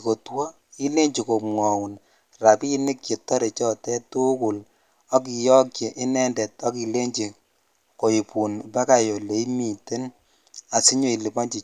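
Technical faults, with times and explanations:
No technical faults can be heard anywhere in this recording.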